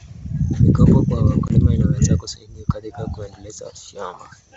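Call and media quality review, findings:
Channel delay (comb filtering), 0.59 s to end: slight dulling of the top end. Two channels summed to mono with about one sample of offset, around 20 µs. Cancellation notches land high, first one near 20 kHz, so in this band it's a gentle high-frequency droop, not obvious hollowness. Check the stereo-to-mono downmix stage.

Packet loss on an ADPCM call, 1.48 to 1.52 s: hard-edged 20 ms dropout, which fits a single lost packet, filled with silence. Decoder's predictor and step size lose sync with the sender, so audio comes back slightly distorted, settling within tens of milliseconds. G.722 path at 64 kbit/s sounds faithful either side of the hole.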